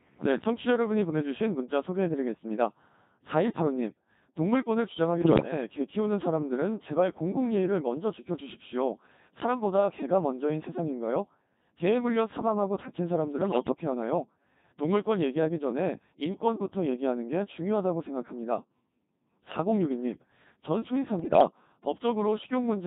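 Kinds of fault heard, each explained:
Codec 2 vocoder: speech is rebuilt from pitch and spectral envelope using sine waves, so it sounds buzzy and robotic throughout, which fits a 2.4 kbit/s mode.
Bit errors on digital voice radio: corrupted frames make the synthetic speech leap in pitch, level and tone, warbling and bleeping only in brief bursts near 5.2, 13.4 and 21.2 s.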